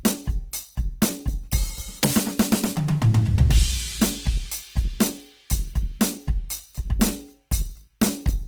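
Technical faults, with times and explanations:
Throughout, Opus compression: a likely low-rate Opus encode in its CELT music mode, consistent with roughly 16 kbps, keeps band energies but fills starved bands with folded or noise content, so tones turn plainly grainy and rough while the bandwidth stays full, reaching about 20.2 kHz.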